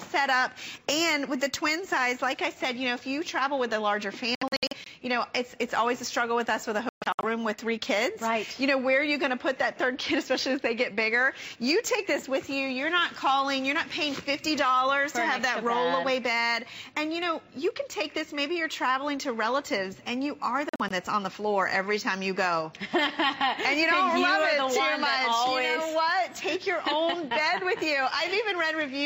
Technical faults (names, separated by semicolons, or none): Bluetooth dropout